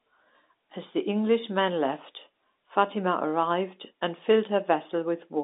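Nothing is technically wrong with the speech recording, which has the narrow band of an ordinary fixed-line telephone call, with no sound above about 3.8 kHz.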